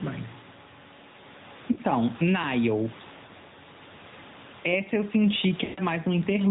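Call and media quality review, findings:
Gain pumping, whole clip: a gain swing of around 10 dB. Likely an aggressive fast limiter or compressor sitting on mic gain set way too hot, so levels get squashed together. The room noise sits about 28 dB under the speech.

AMR narrowband mobile codec, throughout: hard 4 kHz ceiling, buzzy, synthetic-sounding speech, with clearly audible coding damage. Sounds like a mid-rate AMR-NB mode, roughly 10 kbps. The vocal-tract-plus-pulses model is audibly struggling here.

Lost AMR speech frames at 1.72–1.78 s, 3.26–3.30 s and 5.64–5.81 s. The first two are short warbly dips. The last is smeared and stretched, fading toward silence before speech returns weak and rough. Decoder concealment is repeating the last good parameters with decaying gain. The gaps fit about two, one and seven frames.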